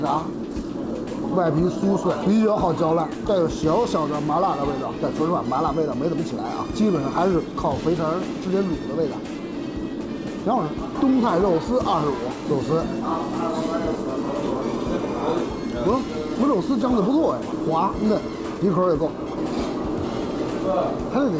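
No technical faults can be heard in this audio, which carries the character of a WebRTC call path with nothing above 8 kHz, consistent with the G.722 wideband codec at 64 kbps.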